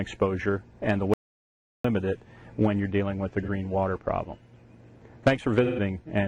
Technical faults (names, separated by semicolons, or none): audio dropout to silence; AAC frame loss with concealment